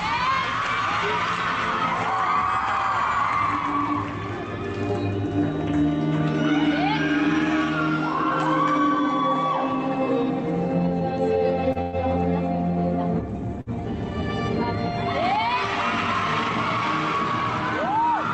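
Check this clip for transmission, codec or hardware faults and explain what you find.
There are three timing glitches, all in the back half, over an Opus-style call path whose audio tops out around 8 kHz.

The first is a short stall from a late packet at 11.72 to 11.78 s. A packet showed up late, the jitter buffer ran dry, and the receiver stretched the last bit of sound for about 30 ms before picking up exactly where it left off. Nothing's lost; you just hear a sound held a touch too long, with a faint buzzy smear.

Right after it, from 11.81 to 11.96 s, there's a call audio freeze. It's most likely packets being held up in transit, which left the buffer empty long enough that the receiver had to invent about 114 ms of audio. What you hear is the last sound carried on as a fading buzz or hiss. It never drops to silence. Then the audio resumes from the same spot, so a gap gets inserted rather than anything going missing.

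The second short stall from a late packet lands at 13.61 to 13.69 s. It's the same mechanism as the first, just longer, with about 55 ms of filled-in sound. You hear the same held, slightly buzzy tail here. Together these three events push the playout about 200 ms later than where it started.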